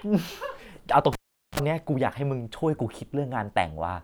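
At 1.13 s the speech is broken by a cable pulled and plugged in: a pop, about 420 ms of near silence, then roughly 46 ms of 60 Hz mains buzz as only the tip touches, and a second pop at 1.60 s. The waveform shows spikes flanking a flat gap; the spectrogram shows vertical clicks and evenly spaced hum harmonics.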